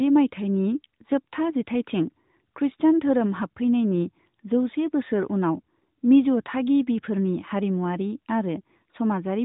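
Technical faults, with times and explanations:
Nothing here needs flagging, since no technical faults turn up anywhere in this speech clip.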